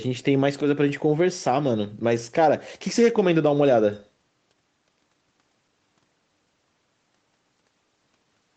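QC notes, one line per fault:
No faults to note.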